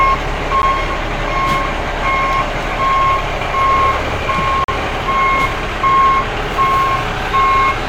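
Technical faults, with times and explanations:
0.62 s and 4.64–4.68 s, gap between stream segments: the sound drops into hard-edged silence for about 12 ms, then about 42 ms. The timestamps of adjacent segments, likely 2 s long, don't meet, so the player pads the difference with silence. Nothing is cut, and the clip runs that much longer.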